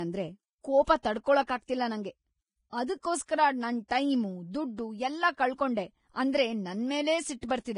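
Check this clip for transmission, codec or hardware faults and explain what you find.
One fault runs through the whole speech clip: the sound fits Vorbis compression at a low bitrate, likely somewhere under 30 kbps. At that setting the encoder discards everything above 10.5 kHz and quantises the remaining treble so coarsely that fine detail is replaced by noise of similar energy. The result is a dull top end with a hissy, grainy sheen over sibilants, roughened harmonics and smeared consonant onsets, and the damage is heavy.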